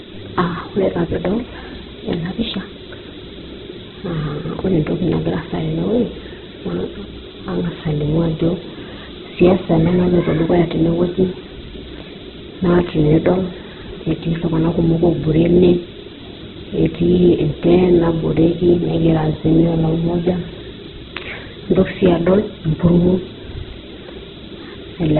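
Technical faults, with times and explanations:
throughout, Opus compression: the speech has nothing above 4.1 kHz and sounds heavily grainy and rough rather than swirly, likely because the encoder fills starved bands with folded or noise content instead of leaving holes, which fits a rate near 8 kbps.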